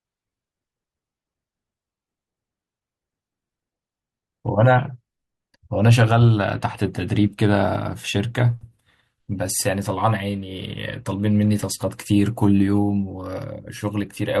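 No technical faults are audible anywhere in the speech recording.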